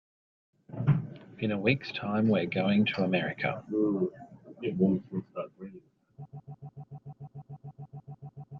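At 6.25 s the speech turns into a broken-record loop: a fragment of about 0.15 s repeats exactly, back to back, 16 times until the end. The likely cause is a stalled player or stream resending its last buffer, so the intervening audio is lost.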